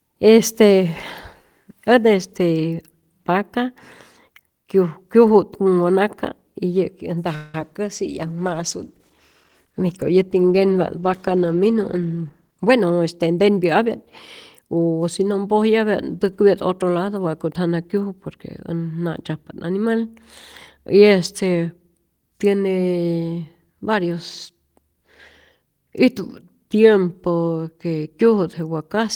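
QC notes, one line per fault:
7.35–7.55 s, call audio freeze: the last sound is stretched into a fading buzz for about 184 ms, likely delayed packets draining the jitter buffer; audio resumes with nothing lost.
7.60 s, short concealed packet loss: about 10 ms never reached the decoder, so the gap is patched by continuing the previous sound, leaving a brief smear or wobble.
7.94–12.76 s, call bitrate drop: the encoder falls from 32 to 17 kbps after the bandwidth estimate dips, so coarser coding makes the sound rougher and duller until it recovers.
11.89–13.86 s, jitter buffer speed-up: the receiver trims pitch-period slices, around 150 ms in total, to shrink a swollen buffer, so the audio plays about 8% fast at unchanged pitch.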